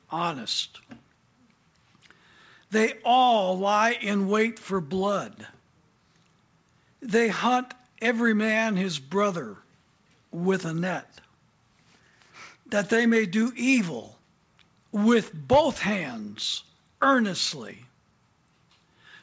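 No technical faults can be heard in the signal, which has come over a call link that leaves nothing above 8 kHz, a band limit that fits a wideband codec such as G.722 running at 64 kbps.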